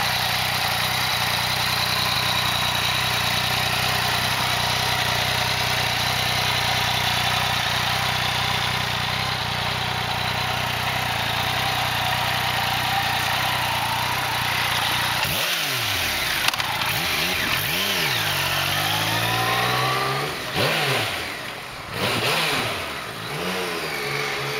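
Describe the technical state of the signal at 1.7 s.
At 1.7 s the signal is intact, with no audible fault at that moment.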